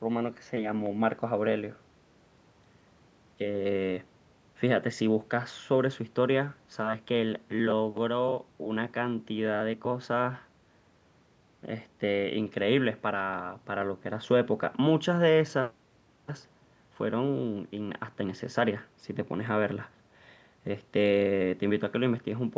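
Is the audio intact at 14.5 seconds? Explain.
Yes, the speech is intact at 14.5 seconds, with nothing there beyond the normal bass roll-off and 8 kHz top end of ordinary call microphone processing.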